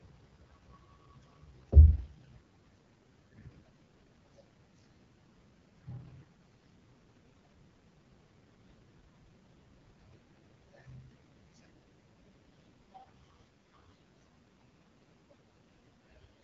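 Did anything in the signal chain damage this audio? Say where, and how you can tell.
Yes. The damage is at the codec stage, throughout the speech: an AMR wideband (HD Voice) codec. Nothing sits above 7.6 kHz, and the speech sounds rough and raspy from start to end. That fits AMR-WB's lowest rate, 6.6 kbit/s, where its pulse-driven vocal model breaks down.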